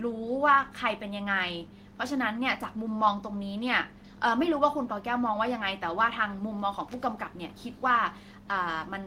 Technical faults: none

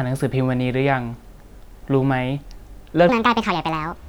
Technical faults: section at the wrong speed

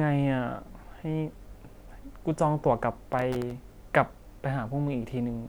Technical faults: processor overload crackle

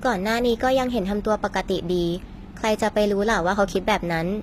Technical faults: HE-AAC compression

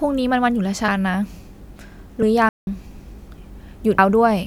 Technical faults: compressed frames skipped; playback stall

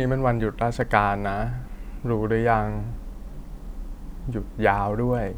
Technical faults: clock drift buffer slips

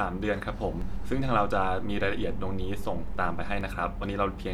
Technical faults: DC step

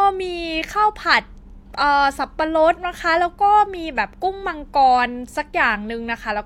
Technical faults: none

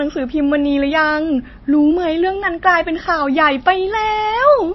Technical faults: MP3 compression

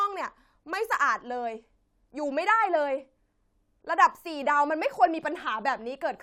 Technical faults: none

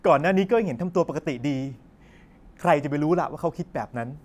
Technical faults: none

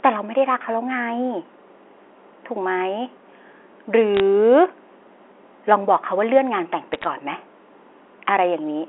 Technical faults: bit errors on a digital phone line

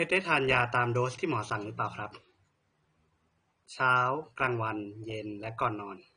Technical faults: AAC compression

